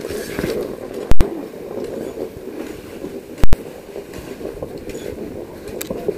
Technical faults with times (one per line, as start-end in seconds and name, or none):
1.11-1.21 invalid numbers at full scale
3.44-3.53 invalid numbers at full scale